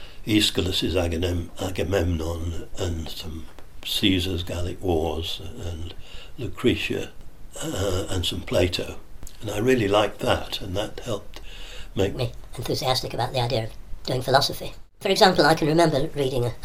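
A section at the wrong speed begins at 12.15 s and runs to the end of the audio at 16.64 s, most likely because that stretch was played back or rendered against the wrong clock. It runs about 1.34 times too fast, and because speed and pitch move together, everything in it jumps up by roughly five semitones and sounds hurried. The change arrives abruptly at 12.15 s rather than drifting in, so the final four and a half seconds sound clearly sped up against what precedes them.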